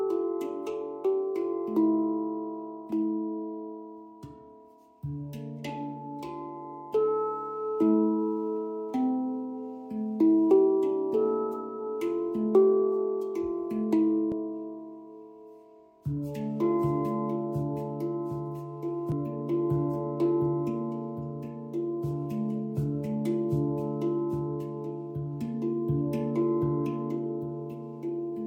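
Two brief bursts of damaged data in a compressed stream interrupt the audio, at 14.32 s and 19.12 s, each lasting only a few milliseconds and heard as a short chirp or blip. At these points part of the compressed data arrived wrong, whether lost, zeroed or overwritten, so the decoder misread the affected frames, lost its place in the stream and had to find the next valid frame header before normal playback resumed.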